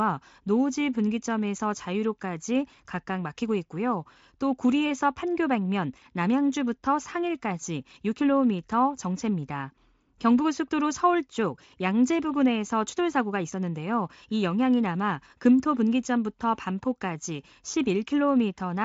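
No technical faults can be heard in this speech.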